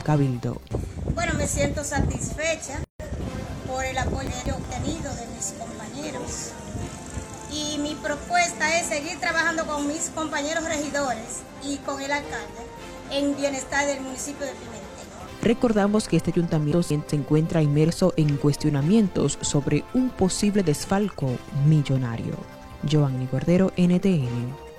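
At 2.84 s the sound drops out for about 155 ms, until 3.00 s. That's a gap at a join of encoded pieces: two separately encoded segments were butted together untrimmed, so encoder delay and end padding sit between them. The edges are smeared, and the sound resumes exactly where it stopped.

Then at 4.27 to 4.64 s, and again at 16.72 to 17.09 s, there are chunks out of order. In each case a roughly 186 ms chunk plays one chunk late, after the one meant to follow it. Nothing goes missing, but you hear a brief jumbled stretch.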